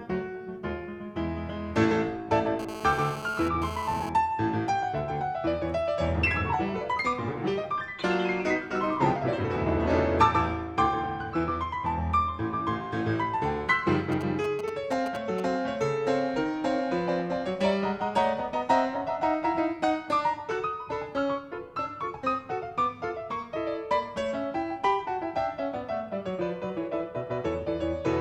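From 2.59 to 4.09 s a GSM phone buzz cuts in: the audio circuit rectifies the radio pulses of a nearby 2G handset bursting about 217 times a second, here while the phone moves data, so the buzz surges and drops out rather than holding steady. It is a harsh, raspy tone at about 10 dB below the programme. On a spectrogram it forms a comb of lines at 217 Hz and its many harmonics, independent of the underlying sound.

At 14.12 s GSM signalling bursts appear and continue to 15.40 s. The handset is sending only short groups of radio bursts, and the rectified pulses come through as a galloping dit-dit-dit of brief 217 Hz buzzes, roughly 10 dB under the signal. The waveform shows clusters of sharp, evenly spaced spikes separated by gaps. On the spectrogram the same harmonic comb is chopped into short vertical blocks.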